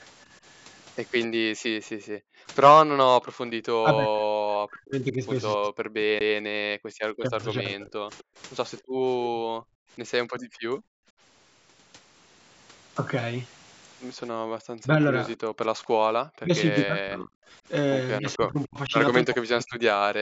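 At 1.79 s the room background drops sharply, by about 40 dB, until 2.47 s. This is background gated by the echo canceller. While the far end played through the loudspeaker, the canceller pulled the microphone down hard. The ambience vanishes, then returns.

From 1.99 s to 8.30 s the talker's speech keeps dipping and breaking up, by up to about 40 dB, for roughly three seconds in total. This is speech suppressed in double talk. Both sides likely spoke at once, so the canceller cut the talker along with the echo.

At 6.19 s there is a CD skip. The player mutes very briefly, then resumes from another point on the disc. The sound jumps abruptly.

From 6.78 s to 6.91 s the background is gated again, about 37 dB down.

From 8.18 s to 8.82 s a faint copy of the sound trails it by 255 ms, about 30 dB down. This is echo leak. Loudspeaker sound likely reached the microphone and escaped cancellation.

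From 8.82 s to 11.16 s the background is gated for about a second and a half, dropping about 35 dB. It is gated once more from 15.44 s to 15.60 s, about 38 dB down.

From 14.38 s to the end the speech is again suppressed in double talk, dipping by up to about 40 dB in pieces.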